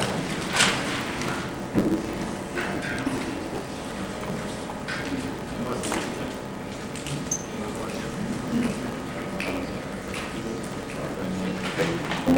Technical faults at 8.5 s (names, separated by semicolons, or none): block size mismatch (truncated)